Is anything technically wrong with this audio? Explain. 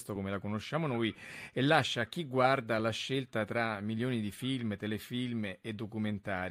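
No, nothing technically wrong can be heard in this speech recording. There are no faults to report.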